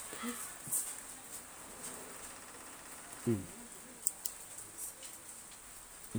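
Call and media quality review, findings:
No faults found in the speech recording. Nothing to log or escalate.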